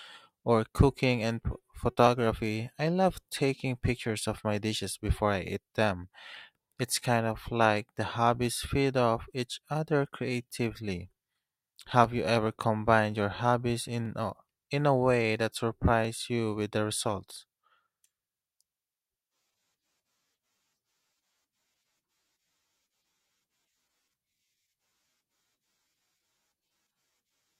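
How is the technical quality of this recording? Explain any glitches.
The recording carries a recurring glitch throughout: periodic USB or driver dropouts. From 0.06 s to 26.03 s, a tiny slice of audio goes missing every 2.0 s, about fifteen times in all. Some background process is stalling the USB transfer or audio driver on a fixed schedule, and roughly half a millisecond of samples is skipped rather than filled. Each skip splices the waveform discontinuously, producing an evenly spaced tick that is audible only while speech is present.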